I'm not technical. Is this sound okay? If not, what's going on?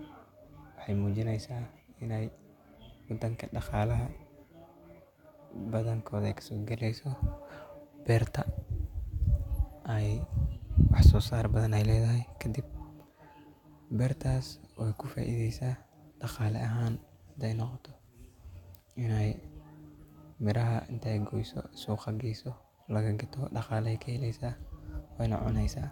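Yes, this speech recording sounds as it should, with no technical problems to point out. There is nothing here that needs explaining or fixing.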